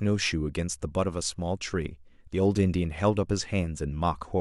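No technical faults are audible in this speech.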